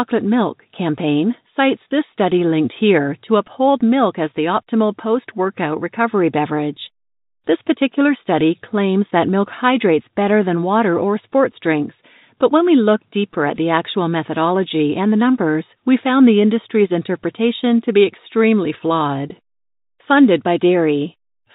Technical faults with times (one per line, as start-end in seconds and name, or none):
none